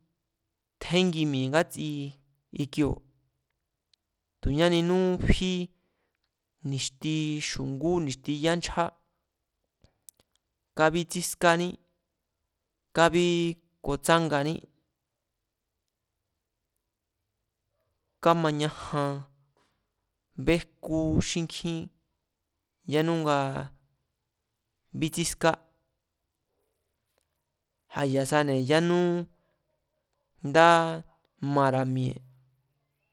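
Speech recording with gritty, coarsely quantised codec damage throughout, likely Bluetooth SBC compression at a low bit pool fitting about 96 kbps, with nothing above 19.5 kHz.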